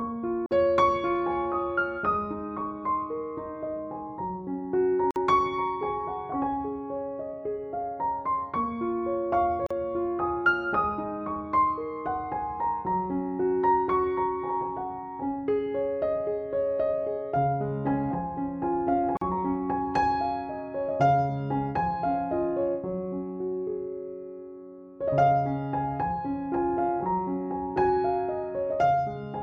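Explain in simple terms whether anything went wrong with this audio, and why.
The sound briefly drops out four times: at 0.46, 5.11, 9.66 and 19.17 seconds, each time for about 40 to 50 milliseconds. These are gaps at a join of encoded pieces. The audio was compressed in separate chunks, and the silent padding at each chunk's edge was left in when they were stitched together.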